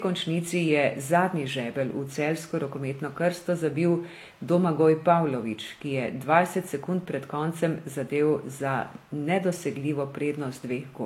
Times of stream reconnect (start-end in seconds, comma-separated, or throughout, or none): none